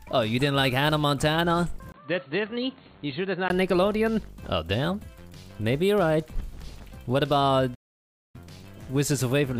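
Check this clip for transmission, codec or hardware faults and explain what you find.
Two faults can be heard.

From 1.92 to 3.50 s the input appears to have switched to a poorer device, likely another microphone or a headset profile. A 20 ms gap opens the section, the band narrows, the level drops by roughly 5 dB and a new noise floor appears well below the signal. Unlike a low-pass filter, the tone, level and noise all change together and then recover.

From 7.74 to 8.36 s there is a playback stall. The output goes silent for about 0.59 s, likely because the player ran short of data or was blocked. A dropout loses audio, but here the sound resumes after the gap.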